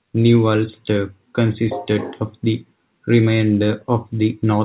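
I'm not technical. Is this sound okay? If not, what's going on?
Yes, this speech sounds okay: it has the narrow, telephone-like sound of a normal call connection, and nothing stood out as a problem on listening.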